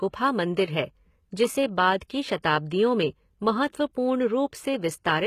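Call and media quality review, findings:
Gritty, metallic sibilants throughout; upper bands copied from below on a spectrogram. Likely HE-AAC compression with band replication, fitting a low bitrate near 20 kbps.

Pre-echo at 2.42 s: short hiss about 11 ms ahead of an attack, visible as a noise smear before the waveform onset. Transform block quantisation noise spreading backward.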